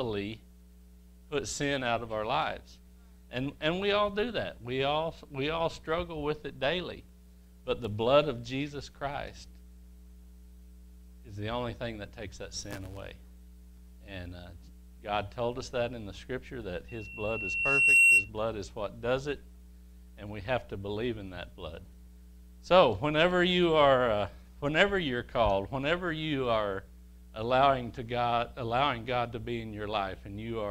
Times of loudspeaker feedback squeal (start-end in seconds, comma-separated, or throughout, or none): 16.88-18.30